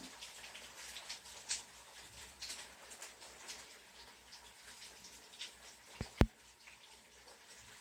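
No technical faults can be heard anywhere in the audio, and the signal stays intact throughout.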